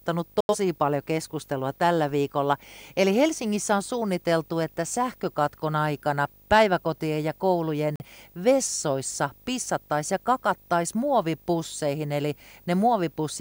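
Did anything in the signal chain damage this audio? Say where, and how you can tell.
Yes. Video or display buzz runs throughout: a 50 Hz field-rate buzz plus a 15.6 kHz line tone, around 30 dB below the speech, from display coupling into the analogue wiring.

Digital broadcast dropout mutes the speech at 0.41–0.56 s, before "paljon keskustelua tällä viikolla", and at 7.96–8.05 s, between "aikana päiväkotien ja koulujen" and "vessoissa pissattaisiin ja kakattais". The receiver lost or rejected frames and stayed silent until good ones returned; the gaps fit two frames and then one.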